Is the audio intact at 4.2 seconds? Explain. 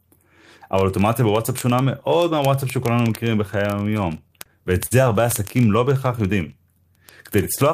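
No, it isn't. Around 4.2 seconds you're hearing two problems stacked on top of each other.

First, word clock ticks run from about 0.10 s right to the end at 7.74 s, so 4.2 s is squarely inside them. The receiving device is reading the digital link on its own clock, which is off from the sender's by roughly a tenth of a percent. The two clocks slip past each other about every 20 ms, and each slip misreads a sample and drops or repeats one. That gives a steady, fast ticking laid over the speech.

Second, there's a stutter from repeated stalls between 3.97 and 4.47 s. Packets arrived late, the jitter buffer kept running dry, and the receiver filled each of the four gaps by continuing the last bit of sound. Together those fills add up to 59 ms, with the longest at 26 ms, which is about 12% of that half-second. Nothing is actually lost, but the speech hitches and drags through that stretch.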